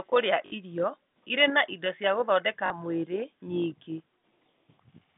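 At 0.46 s there's a 60 ms gap, which fits about three 20 ms packets, and again at 2.66 s for 40 ms: packet loss with last packet repeated. The receiver loops the last chunk, so you get a brief 50 Hz robotic buzz over the narrow telephone band.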